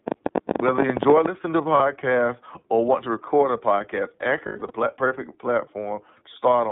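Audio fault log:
throughout: iLBC codec. Sound is band-limited to roughly 150 Hz to 3.7 kHz, slightly rough and synthetic, consistent with iLBC at 13.3 kbps with 30 ms frames.
0.08–1.27 s: train of clicks. About twenty sharp ticks, unevenly spaced at about 16 per second, peaking about 15 dB above the speech, likely from electrical interference.
1.77–1.81 s: lost iLBC frames. A brief held, buzzy vowel fills the gap where one frame was lost. The decoder repeats the last pitch cycle, then recovers immediately.
4.46–4.72 s: lost iLBC frames. Several short smeared, breathy stretches, the longest about 100 ms, where roughly five frames were lost and concealed with repeated pitch cycles and noise.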